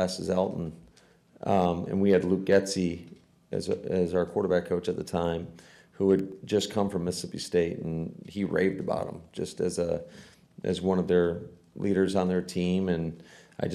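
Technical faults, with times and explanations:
6.19–6.58 s, CD scratch ticks: A blemish on the disc surface damaged more data than the player's error correction could rebuild, and the damage came back on each turn of the disc. The player covered each bad stretch by interpolating or muting, which produces four short ticks, the longest around a millisecond and a half. They are spaced roughly eight per second, a steady rhythm that matches the disc's rotation.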